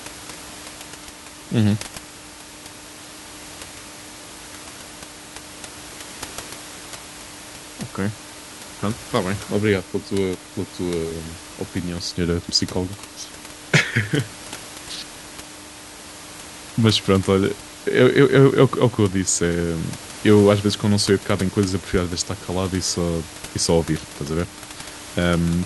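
No technical faults are audible.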